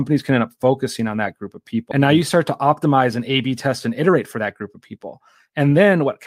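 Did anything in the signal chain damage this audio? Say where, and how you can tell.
Yes. Skip ahead at 1.91 to 1.93 s, right after "on that group of": the speech jumps forward with no gap and no fill, and about 0.7 s of material is simply gone. This points to the network stage or the jitter buffer. A stretch of packets was lost in transit or discarded when the buffer overflowed while later audio was already queued, so the two sides of the missing piece are joined almost directly.

Jitter buffer speed-up from 3.68 to 6.06 s: the speech runs at about 110% of its normal rate while the pitch stays the same, so this stretch sounds hurried. The receiver's jitter buffer had built up more audio than its target, typical after delayed packets arrive in a burst. To reduce the delay, it repeatedly cut out short pitch-period-sized pieces, trimming roughly a third of a second across the stretch.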